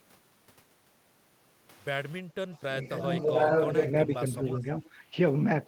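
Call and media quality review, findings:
Switch to a distant microphone, 1.72 to 3.90 s: sound turns abruptly roomy and hollow with thinner bass, little level change, room noise around 30 dB below speech. Likely the close mic dropped out and a farther pickup took over.

Background gated by the echo canceller, 2.23 to 2.36 s: room tone dips by about 11 dB for roughly 150 ms while far-end playback is active, then recovers on canceller release.

Speech suppressed in double talk, 4.06 to 4.25 s: near-end speech ducks by about 5 dB for roughly a tenth of a second. Likely the echo canceller attenuating near-end speech along with the loudspeaker echo during overlapping talk.

Echo leak at 4.11 to 4.17, 4.54 to 4.66 and 4.85 to 4.89 s: short delayed copies of the speech at 341 ms lag. The first two are about 20 dB down and the last about 30 dB down. Likely residual echo passing a loudspeaker-side canceller.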